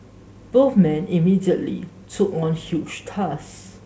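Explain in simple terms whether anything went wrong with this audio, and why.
Nothing went wrong here.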